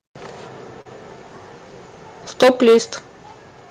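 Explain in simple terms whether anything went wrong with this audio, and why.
Around 0.81 to 0.87 s, a short concealed packet loss occurred: a small piece of the call arrived too late, so the receiver patched the gap by stretching out the sound just before it. You hear a brief smear or wobble lasting a few hundredths of a second.

From 2.42 to 2.78 s there is microphone overload, likely because the microphone's input was set too high. The loudest peaks hit the converter's limit and had their tops sliced off, affecting roughly a fifth of that stretch and giving it a harsh, crackly edge.

At 2.44 s, right as that distortion begins, comes the microphone volume stepped down: the call software, likely reacting to the overload, turned the input down in one go. Both the voice and the background drop slightly and suddenly in loudness.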